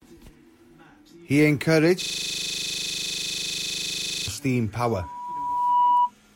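From 2.02 to 4.28 s a system hang loop repeats one 40 ms slice at 25 Hz, giving a rattling buzz, which fits a frozen driver cycling a 40 ms buffer. At 4.90 s a loudspeaker feedback squeal starts: a 976 Hz tone swells over about a second to roughly 5 dB above the speech, lasting until 6.11 s.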